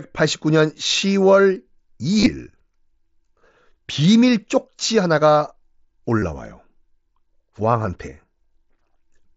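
Around 1.01 s there's a brief spot of concealed Bluetooth headset packet loss. The link between headset and phone dropped about 15 ms of audio, and the receiver patched the gap by repeating the closest-matching slice of what it had just heard. From 2.19 to 2.26 s it's worse: about 52 ms lost across 75 ms, with the longest run at 22.5 ms, giving a short buzzy hold and a small warble as real sound comes back. At 6.19 to 6.22 s, about 30 ms goes the same way, all under the light grain of the mSBC wideband headset codec.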